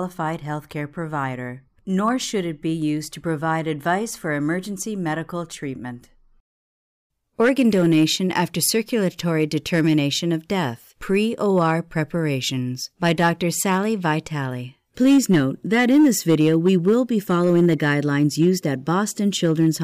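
Crackle and harsh fuzz break in on loud speech peaks at 2.05 to 2.09 s, 7.40 to 9.99 s, 11.58 to 11.71 s, 13.05 to 14.11 s, 15.05 to 18.98 s and 19.44 to 19.69 s, worst in the long stretch from 15.05 s. This is hard clipping: the level ran about 1 to 7 dB past what a stage could pass, so peaks were sliced flat, spraying high harmonics that turn small overs into crackle and large ones into fuzz.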